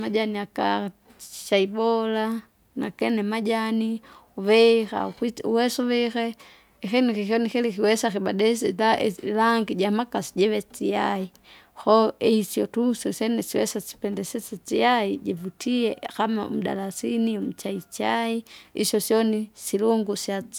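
The speech recording contains no audible technical faults.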